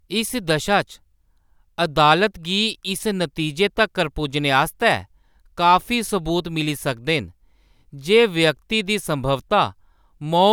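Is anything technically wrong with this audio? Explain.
No, there are no technical faults.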